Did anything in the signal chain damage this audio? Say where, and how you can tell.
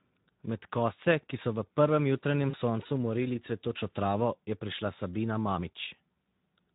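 Yes. At the codec stage, Speex starves the excitation of bits throughout, so the speech sounds plainly hoarse and noisy, consistent with about 11 kbps.

On the network, VoIP packet loss concealed by the speech codec hits at 2.49 to 2.56 s. The decoder extrapolates a fading smear, fitting roughly 40 ms lost.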